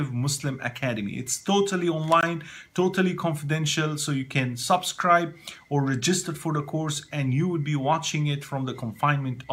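At 2.21 s the sound drops into a brief silence of about 18 ms, with smeared edges, then resumes where it stopped: a gap at a join of encoded pieces, where untrimmed encoder delay and end padding stayed in.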